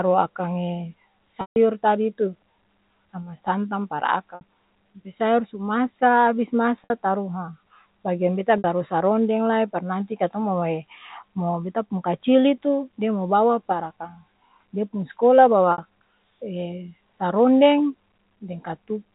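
Speech, with five short stretches where the sound freezes on one repeated pitch: 150 ms at 1.41 s, which fades into silence, then held, buzzy 60 ms stretches at 4.35, 6.84, 8.58 (after "bageang beta") and 15.72 s. Each is packet loss with pitch repetition, where the receiver fills missing audio by looping the last pitch period.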